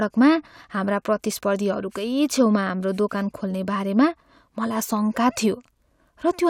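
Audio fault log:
Nothing stood out on listening to the speech.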